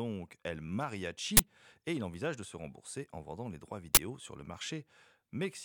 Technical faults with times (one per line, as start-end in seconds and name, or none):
1.37-1.39 uninitialised buffer
3.95-3.97 uninitialised buffer